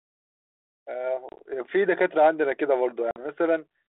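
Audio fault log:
1.29–1.42 s, packet loss on an ADPCM call: 60 ms of audio drops out as silent gaps scattered over 100 ms, the longest 30 ms. The decoder's adaptive predictor loses sync, so sound returns slightly distorted.
3.11–3.25 s, packet loss on an ADPCM call: a 50 ms hard-edged hole, with several packets missing. Afterwards the mismatched step size causes brief distortion until the decoder resettles.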